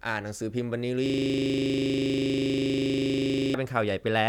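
Speech clip with a system hang loop from 1.06 to 3.54 s: a 40 ms chunk repeats at 25 Hz, giving a rattling buzz while the audio buffer cycled on a frozen system.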